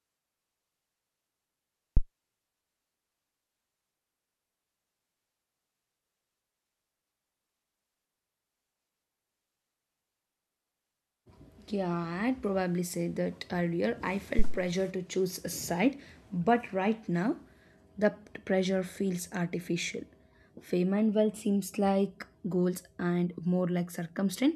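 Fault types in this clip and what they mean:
Phantom power thump: switching a supply on a live input sends a step through the coupling capacitors. Two deep thumps peak at about -10 dBFS, showing as big waveform swings and brief bass-band spectrogram bursts.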